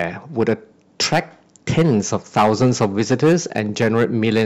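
Speech with hard clipping throughout: driven about 12 dB past full scale, a few percent of samples are cut flat, giving harsh crackle on louder syllables.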